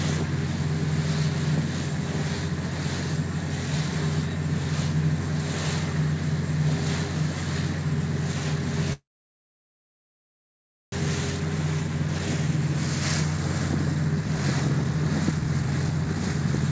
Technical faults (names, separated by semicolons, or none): call audio freeze; jitter buffer speed-up